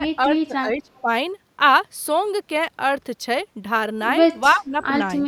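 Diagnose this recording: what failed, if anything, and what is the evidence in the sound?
The speech gets pushed down twice, from the start to 1.09 s and again from 4.54 to 4.78 s. In the first stretch the dips add up to around 0.7 of a second, and the deepest drop is roughly 15 dB. The second is shorter, about a fifth of a second, and dips to a similar depth. That's call processing, most likely speech suppressed in double talk. With both ends talking at once, the echo canceller couldn't tell this talker from the loudspeaker echo, so it ducked everything.

Right at the tail of that first dip, between 0.95 and 1.01 s, there's a faint delayed copy of the voice sitting about 35 dB below the speech, trailing by 342 ms. That's an echo leak, again in call processing. One side is on a loudspeaker, and its canceller didn't strip all of the playback its mic picked up, so a scrap came back down the line. 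It's brief and very quiet, probably a residual the canceller missed.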